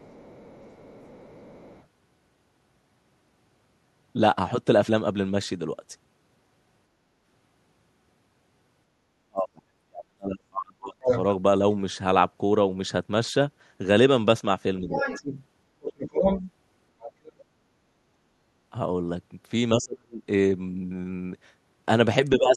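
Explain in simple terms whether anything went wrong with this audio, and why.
Two things went wrong, both most likely in the echo canceller on the talker's end of the call.

Other side's voice leaking through: the talker's device seems to play the far side on a loudspeaker, and the echo canceller failed to scrub all of it from the microphone. A second voice slips in, very faintly from 0 to 1.85 s, as loud as the talker from 11.01 to 11.2 s, and nearly that loud from 14.93 to 17.32 s.

Speech suppressed in double talk: when both sides spoke at once, the canceller couldn't tell the talker apart from the echo and turned both down. The talker's voice nearly vanishes from 9.29 to 11.08 s and again from 19.78 to 20.22 s, and dips more gently from 14.8 to 15.06 s and from 22.38 s to the end.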